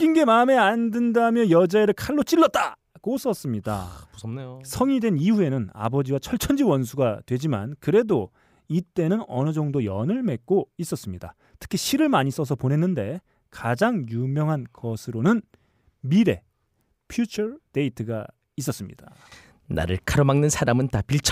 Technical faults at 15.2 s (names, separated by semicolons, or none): none